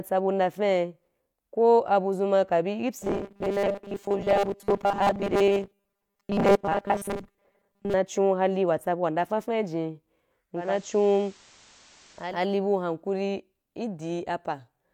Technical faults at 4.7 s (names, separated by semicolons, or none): robotic sound from repeated short buffers